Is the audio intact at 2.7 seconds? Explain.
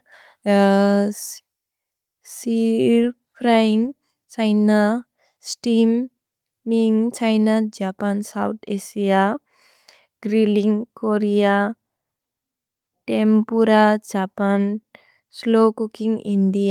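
Yes, the speech at 2.7 seconds is intact, with no audible fault at that moment.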